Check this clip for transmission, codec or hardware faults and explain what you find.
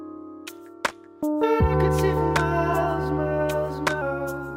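There is one fault, a wrong sample rate, from 0.48 s to 4.02 s. The samples play back about 1.09 times too fast with no rate conversion, so speed and pitch rise together by roughly 1.5 semitones. That fits 44.1 kHz material being clocked out at 48 kHz. The sound comes across as slightly raised and hurried. On a spectrogram every harmonic and formant sits shifted upward by the same ratio, and on the waveform events arrive about 8% closer together.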